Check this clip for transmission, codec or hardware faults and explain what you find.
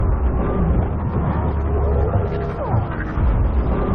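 Two faults are present, both damaged data in a compressed stream, at 0.89 to 0.91 s and at 3.38 s. Corrupted bytes make the decoder misread those frames and lose sync until it finds a valid frame header, producing a brief chirp or blip each time.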